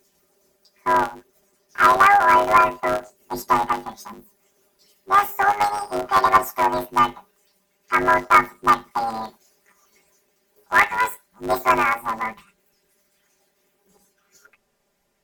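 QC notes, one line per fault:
throughout: planar audio read as interleaved. The channel data arrives in blocks of 10 ms, each holding one channel's run of samples followed by the other's, but playback treats it as alternating left-right pairs. Each block therefore gets squeezed into two half-length bursts, one per channel, at double speed, while the overall pace holds. With blocks this short, the speech takes on a robotic buzz at the 100 Hz block rate rather than a clear octave jump.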